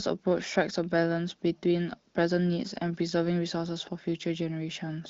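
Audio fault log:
No faults heard.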